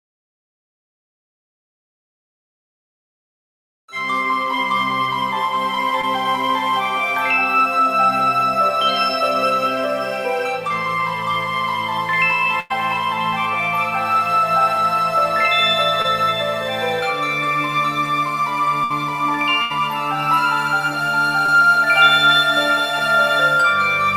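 At 6.01, 10.69, 16.02 and 21.46 s, short concealed packet loss bridges about 20 ms of missing sound, producing a brief smear or wobble. At 12.60, 18.84 and 19.62 s, bursts of packet loss fill gaps of about 100, 60 and 80 ms with a held buzz or fading hiss. After each burst, the sound then jumps forward.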